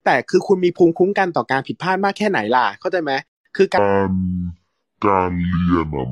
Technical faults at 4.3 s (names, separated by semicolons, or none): section at the wrong speed